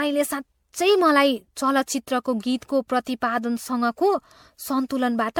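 Throughout the speech the sound is swirly, smeared and hollow, with consonant attacks blurred, beyond what a single encode at this rate would produce. The likely cause is generation loss: repeated MP3 decoding and re-encoding, around seven passes at 96 kbit/s, each on a shifted frame grid that requantises and compounds noise. A spectrogram shows patchy, flickering holes across the upper bands and smeared transients, with nothing above 20 kHz.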